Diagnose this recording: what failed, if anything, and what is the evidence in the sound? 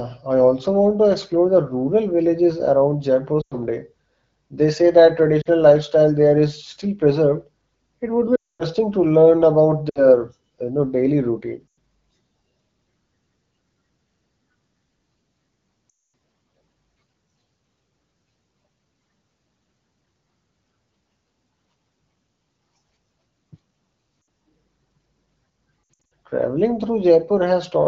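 Brief warbles and dropouts to near silence at 3.41, 5.42, 8.36, 9.89, 11.68, 15.89, 24.21 and 25.84 s point to lost AMR speech frames on the radio link, concealed by the decoder with decaying gain.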